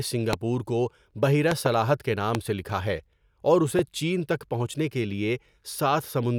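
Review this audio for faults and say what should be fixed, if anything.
Loud pops at 0.33–0.35 s, 1.51–1.68 s (a double pop), 2.35–2.37 s and 3.79–3.81 s jump about 20 dB above the speech, the last nearer 15 dB. Each is likely a voltage pulse from a plug, switch or static that the following circuitry turns into a sharp thump while the speech continues underneath.

Secure cable connections, avoid switching equipment during recording, and ground the setup to prevent static discharges.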